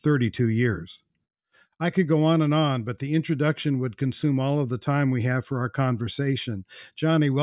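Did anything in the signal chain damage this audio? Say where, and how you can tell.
No, nothing audible in this speech points to damage at any stage of the chain.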